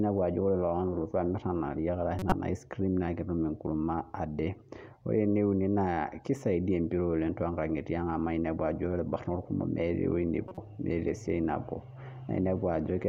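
At 2.19 to 2.32 s and again at 10.48 to 10.58 s, just before "meeta siatin", you get a corrupt frame decoded: flipped bits across a few frames scatter energy into the wrong frequencies, giving short chirpy noise bursts, the first one noticeably louder.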